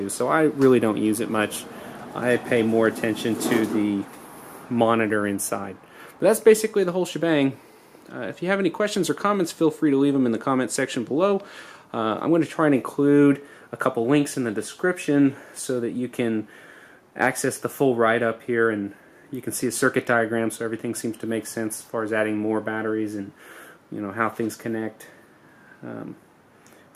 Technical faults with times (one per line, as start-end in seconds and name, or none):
none